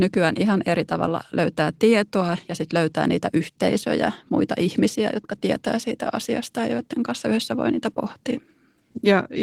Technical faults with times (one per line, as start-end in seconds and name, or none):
none